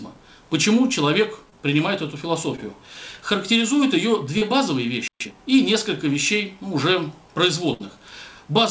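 Audio carried over a call link, band-limited with nothing above 8 kHz, which fits a wideband call codec such as G.722. It shows four kinds of fault. Short concealed packet loss occurs at 1.50 to 1.54 s, 2.56 to 2.60 s and 4.38 to 4.43 s. About 20 ms is missing in each of the first two and 40 ms in the third. The receiver patched each hole by extending the preceding sound and then blending back, so each is heard as a quick smear or wobble. These differ from the later burst because they are too brief to audibly fade or skip ahead. A playback stall runs from 5.08 to 5.20 s. The output goes fully silent for about 127 ms, with no held buzz or hiss filling it, most likely because the player's buffer ran dry or its thread was blocked. That true silence is what separates it from concealed loss. Time-compressed catch-up follows directly, from 5.20 to 5.32 s. The player recovers its backlog by playing at 2.0 times speed, cutting and cross-fading small slices. 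The sound is rushed but keeps its normal pitch, which separates it from a simple speed-up that would raise the pitch. A burst of packet loss sits at 7.73 to 7.82 s, where about 60 ms is lost. The concealment stretches the last sound into a held buzz or hiss that fades as the gap lengthens, and then the audio resumes further on with that stretch gone. The audible fade and the skipped material mark it as a burst rather than one of the brief earlier patches.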